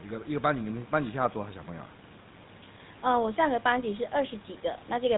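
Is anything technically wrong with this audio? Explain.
Yes. GSM full-rate codec damage runs throughout the speech. The coder drives a vocal-tract model with regularly spaced pulses, keeping every third excitation sample and cutting everything above 4 kHz. This gives a plainly audible buzzy, gravelly roughness that fits a 13 kbps stream.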